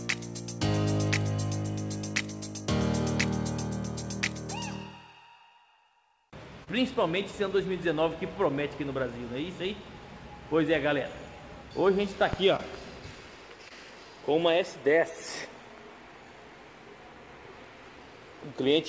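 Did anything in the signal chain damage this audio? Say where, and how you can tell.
Yes, at the network stage: short concealed packet loss at 6.64–6.68 s, 12.56–12.61 s and 13.69–13.72 s. Each time about 20 ms failed to arrive, and the receiver extended the preceding sound to fill it, then blended back, leaving a brief smear or wobble.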